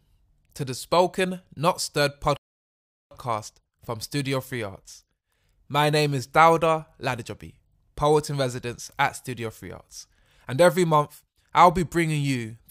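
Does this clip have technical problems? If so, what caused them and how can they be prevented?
Yes. A rebuffering stall interrupts the speech from 2.37 s to 3.11 s: playback drained its downloaded audio, went silent, and picked up at exactly the same point once more data arrived, adding 0.74 s with nothing lost. On a waveform it shows as a flat line spliced between two otherwise continuous stretches; a spectrogram shows a clean vertical blank band. Prevent it with a larger startup buffer or adaptive bitrate so downloads keep ahead of playback.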